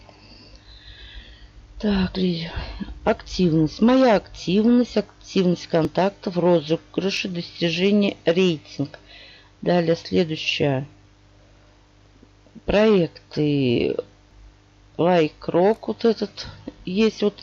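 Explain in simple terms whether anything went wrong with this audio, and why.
Three short skips, at 5.85, 7.17 and 14.31 s. Each is a spot where the sound jumps ahead with no gap, most likely a dropped buffer (overrun): the software fell behind, so a slice of audio, about 20 ms at the first and 10 ms at the others, was overwritten and lost.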